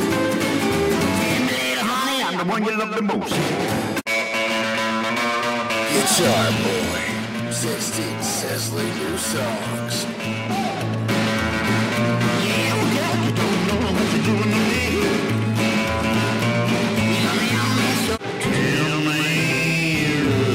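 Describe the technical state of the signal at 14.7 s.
At 14.72 s the audio lurches forward as roughly a tenth of a second of material vanishes. These are compressed frames skipped: about four frames, spacing that fits a 23.2 ms frame, never reached the output.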